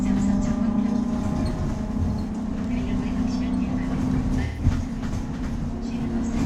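In this recording of everyday sounds, a brief smeared, noisy patch appears from 4.45 to 4.64 s, where the detail of the sound washes out into a hazy, phasey blur before the clip snaps back into focus. This is AAC frame loss with concealment. A short run of encoded frames went missing, consistent with about three frames or roughly 128 ms of data, and the decoder papered over the hole by reusing the last good spectrum with randomised phase.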